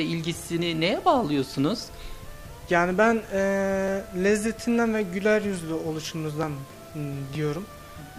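Dropped buffers (overrun) likely cause the jumps at 3.88, 6.43 and 7.35 s, where the audio skips ahead by about 10, 30 and 30 ms, with no gap between the joined edges.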